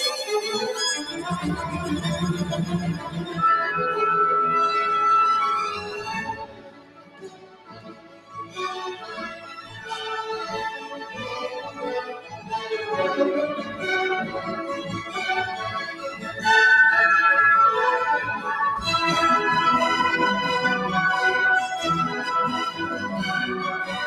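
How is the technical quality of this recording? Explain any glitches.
The recording is marred by an audible pumping and thinning throughout, with several moments where the sound sinks noticeably.

Noise suppressor applied to music or sounds: across the whole clip, sustained parts and tails swell and fade by something like 10 dB while sharp onsets stay intact. A speech-oriented noise suppressor is misreading steady tones and ambience as noise and pulling them down.

Sound cut by the noise suppressor: at 0.97–1.27 s, 2.94–3.38 s, 5.75–8.58 s, 8.96–9.87 s, 10.84–11.16 s, 12.18–12.52 s and 15.92–16.31 s, the sound drops away, sinking in level. The suppressor judged these stretches to be noise and attenuated them, by about 14 dB at worst in the long 5.75–8.58 s passage.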